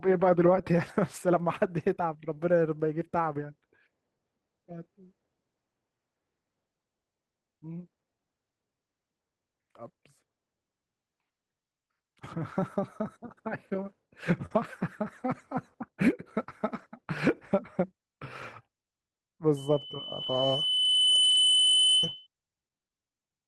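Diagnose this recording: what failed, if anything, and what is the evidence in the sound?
Network stage, lost packet rebuilt from error correction. The speech turns briefly rough and noisy at 0.53–0.59, 14.50–14.64, 16.74–16.84, 18.42–18.44, 20.26–20.28 and 21.30–21.36 s. There are no gaps. The Opus decoder played low-bitrate copies carried in the following packets, covering 20 to 80 ms each time.

Network stage, short concealed packet loss. Brief smears occur at 0.61–0.76 s and 2.34–2.38 s. Here no backup copy arrived. The receiver extended the preceding sound for about 12 ms and 21 ms, then blended back into real audio. About 20 ms of speech is missing at each point.

Network stage, burst of packet loss. At 14.46–14.52 s, consecutive packets failed to arrive. The decoder stretched the last sound over about 46 ms while fading it down. Roughly 40 ms of speech is gone. Error-corrected frames follow immediately after.

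Acoustic stage, loudspeaker feedback squeal. From 19.56 to 22.27 s, a steady 3 kHz tone rises over roughly a second and a half. It ends about 5 dB above the speech. A microphone was picking up its own loudspeaker, and the loop gain exceeded one at 3 kHz.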